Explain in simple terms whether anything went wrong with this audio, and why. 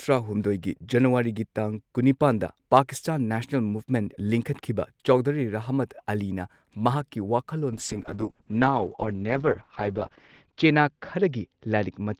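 A call bitrate drop begins at about 7.72 s and lasts to the end of the clip. The connection appeared to lose capacity, so the speech was squeezed into far fewer bits. With so little data to work with, the encoder describes the sound more crudely and throws away the crisp upper range, leaving only the lower part. From there on the speech sounds rough and muffled, at its worst for about 2.5 s, with no recovery before the clip ends.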